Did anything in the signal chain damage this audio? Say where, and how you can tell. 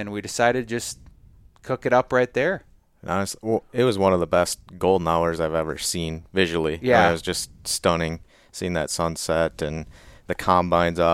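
No, I can't hear any damage from the signal chain in this speech recording. No moment in it points to any stage, from capture through to playback, having acted on the sound.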